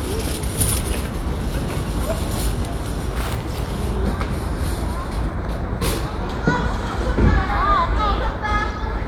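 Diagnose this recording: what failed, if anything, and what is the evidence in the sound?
Nothing failed; no stage shows any fault in the sound.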